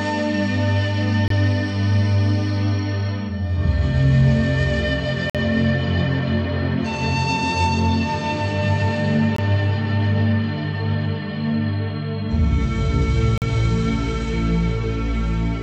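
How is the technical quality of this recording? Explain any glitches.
The recording is interrupted by four short dropouts, each a gap between stream segments. They fall at 1.28 s (about 24 ms), 5.30 s (about 50 ms), 9.36 s (about 20 ms) and 13.38 s (about 41 ms), roughly 4 s apart, which fits every second boundary of 2-second segments. The segments' time stamps leave a gap between one segment and the next, and the player fills that gap with silence. Each is heard as a sudden hole. On a waveform it is a flat line with abrupt edges, and on a spectrogram a thin, clean vertical blank stripe.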